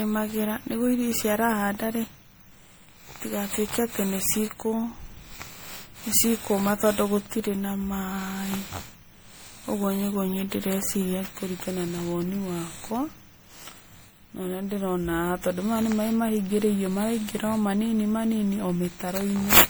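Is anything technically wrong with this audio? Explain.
Yes, there's generation loss across the whole speech clip: it sounds swirly, hollow and smeared, with blurred attacks, likely from repeated MP3 re-encoding, fitting roughly ten passes around 96 kbit/s.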